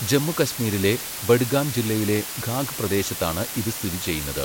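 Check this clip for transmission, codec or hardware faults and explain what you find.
The speech carries low bit depth with dither from start to finish. The hiss sits only about 10 dB below the signal, which points to roughly 5-bit samples. Dither turns the coarse rounding error into steady, even white noise rather than distortion. On a spectrogram it shows as a flat noise floor across all frequencies, and on the waveform as a thick fuzzy band that persists through pauses.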